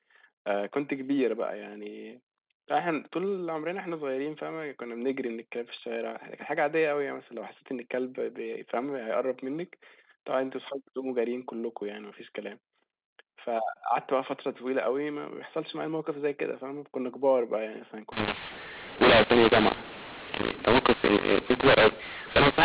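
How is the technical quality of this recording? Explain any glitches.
There's one real glitch, in the last few seconds of this phone-band speech, which is capped below 4 kHz by its G.711 telephone coding. From 18.12 s to the end there's a mu-law and A-law mix-up. Audio written as mu-law is read back as A-law, which scrambles the levels, so the speech turns harsh and distorted and the pauses fill with hiss.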